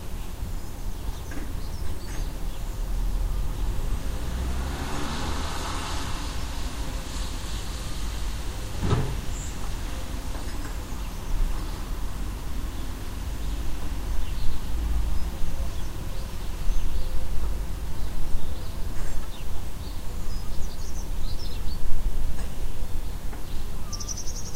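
Sound recording, no technical faults audible anywhere in the clip.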